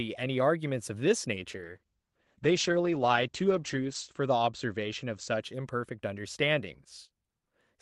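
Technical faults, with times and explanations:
1.51–5.49 s, call bitrate drop: the speech turns rough and watery as the call's bandwidth estimate falls and the encoder is starved of bits, a fall that fits something like 48 kbps sinking to around 11 kbps. With so few bits the Opus coding grows coarse, and the audio band narrows from 12 kHz to 8 kHz, dulling sibilants and air. The worst stretch lasts about 2.65 s before the rate recovers and the brightness returns.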